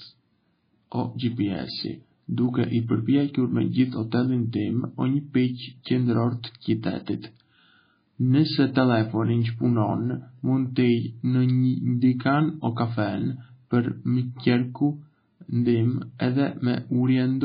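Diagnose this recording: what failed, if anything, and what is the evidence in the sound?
The codec stage failed: the speech was likely squeezed through MP3 at a starved bitrate, around 18 kbps, with heavy damage. Throughout, nothing survives above 5 kHz, and weak frequency lines flicker between frames, giving a watery, swirling texture with smeared attacks.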